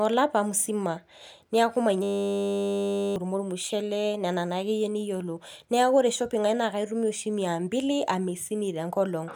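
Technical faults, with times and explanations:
2.03–3.16 s, system hang loop: a stalled driver replays one 10 ms buffer over a hundred times, a steady 100 Hz buzz; about a second of speech is lost.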